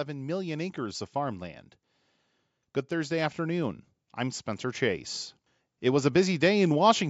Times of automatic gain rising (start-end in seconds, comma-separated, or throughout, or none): 0.06-1.58, 2.96-5.12